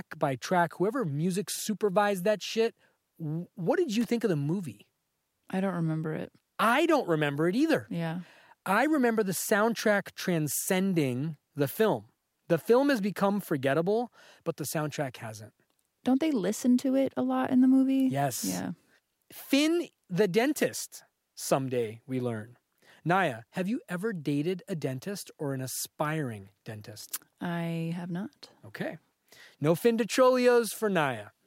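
Loose connector crackle runs from 4.01 to 4.08 s, a brief irregular burst of scratchy crackle between "that shit what did" and "think of the movie". A worn or dirty contact somewhere in the cable path is making and breaking connection as it shifts. Each break chops the speech signal, so the roughly 70 ms event sounds like grit or static.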